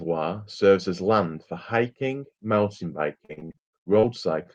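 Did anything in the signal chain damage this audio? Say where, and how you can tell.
Yes, the network stage. From 3.17 to 4.05 s there's repeated packet loss with a robotic sound: ten or so holes, the longest around 54 ms, patched by stretching the previous sound. About a third of that stretch is fill, with roughly 240 ms genuinely gone.

Then a short stall from a late packet at 4.43 to 4.47 s. The jitter buffer ran dry, so the receiver held the last sound for about 23 ms until the packet landed and carried on from the same spot. Nothing's missing, just a brief smear.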